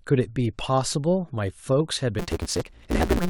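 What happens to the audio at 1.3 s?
Nothing goes wrong at 1.3 s; the speech carries on intact through that moment, with no dropout, click, glitch or other fault.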